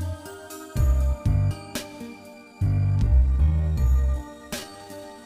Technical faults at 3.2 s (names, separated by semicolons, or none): time-stretched section